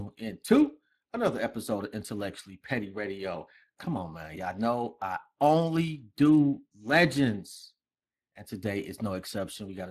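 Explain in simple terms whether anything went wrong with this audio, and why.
Speex codec damage runs through the whole recording, from the first second to the last. Speex is an older speech compressor from internet calls and game chat. Instead of storing the sound itself, it stores a rough recipe for rebuilding the voice, and this clip had too little room to rebuild it cleanly. The speech comes out plainly rough and hoarse, with a noisy edge. The very highest frequencies, above about 15 kHz, are missing.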